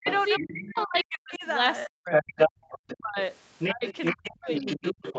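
From the start to 1.45 s, 1.85 to 2.38 s, 2.99 to 3.18 s and 3.73 s to the end, the speech sinks sharply, by as much as about 40 dB. This is speech suppressed in double talk, likely because the echo canceller ducked everything while both sides talked at once.

A second voice comes through from 0.04 to 1.03 s at around 15 dB under the speech, from 2.11 to 2.97 s at about 5 dB louder than it, and from 3.58 s to the end at roughly 5 dB below. This is the other side's voice leaking through, likely loudspeaker echo the canceller left behind.

At 2.66 s the room sound drops by about 17 dB for 40 ms. This is background gated by the echo canceller, which clamped the microphone while the loudspeaker played.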